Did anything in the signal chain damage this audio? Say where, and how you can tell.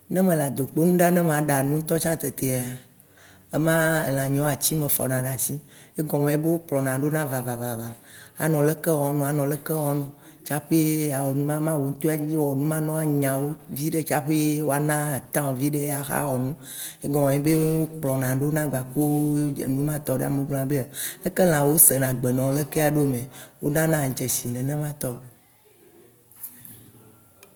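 No, nothing in the chain damaged this audio.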